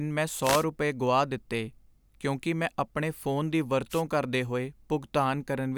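Wireless microphone noise hits at 0.42–0.65 s and 3.90–4.02 s: the radio link fades, so receiver hiss swells into a brief static swish rather than silence.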